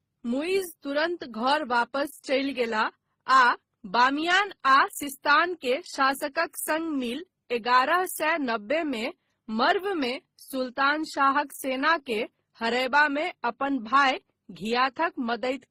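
Throughout, the speech carries layered compression artefacts and nothing above 16 kHz. This likely comes from transcoding between lossy codecs, consistent with MP3, then HE-AAC, then Opus.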